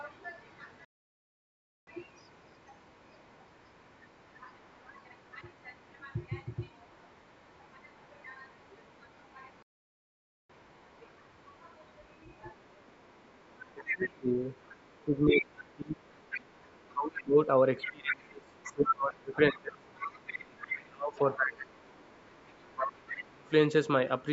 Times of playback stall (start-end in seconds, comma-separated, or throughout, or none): 0.85-1.87, 9.62-10.50